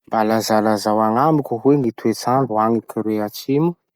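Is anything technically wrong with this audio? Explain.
Yes. Periodic USB or driver dropouts from 1.84 s to 3.89 s, every 1.02 s: a blocked bus silences a couple of milliseconds of speech, giving ticks whose strict regularity separates them from random clicks.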